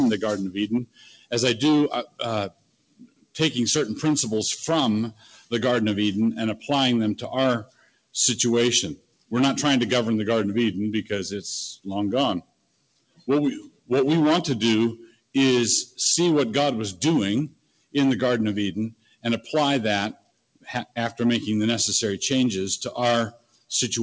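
Throughout the clip the level pumps and flutters, with sustained parts and tails sinking by something like 15 dB while sharp onsets come through. This is a speech-oriented noise suppressor applied to music or sounds, treating steady tones and ambience as noise. The worst dips come as sound cut by the noise suppressor at 0.85–3.35, 5.13–5.52, 7.65–9.32, 11.76–13.9, 14.99–15.98, 17.49–17.95, 18.91–20.97 and 23.31–23.71 s. Held or decaying material there drops by about 16 to 21 dB, with decays chopped short, because the suppressor mistakes that sound for noise. Nothing is heard above 8 kHz, which fits a call path using G.722 at 64 kbps.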